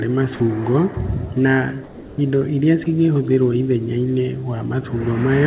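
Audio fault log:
0.36–0.40 s, 0.94–0.96 s and 2.84–2.86 s: sound dropped by the voice detector. Speech briefly vanishes for 30, 20 and 20 ms. Comfort noise fills each gap. The sender likely judged the sound as background and stopped sending, so generated noise was played instead.
1.84–2.18 s: comfort noise in place of the background. For 340 ms the real background, about 21 dB below the loud parts, turns flat and featureless. It also drops by about 3 dB. Transmission likely paused, and the receiver filled the pause with synthetic noise.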